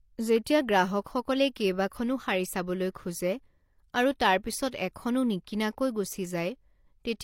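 From start to finish, the speech carries two layers of coding damage at once. Nothing is present above 16.3 kHz. Under that, there is a swirly, metallic smear, and the upper band sounds synthetic and washed over. This is likely transcoding between lossy codecs. The pattern fits an MP3 stage near 96 kbit/s followed by HE-AAC near 32 kbit/s. The second encoder spends its few bits on the first one's artefacts. It then adds its own.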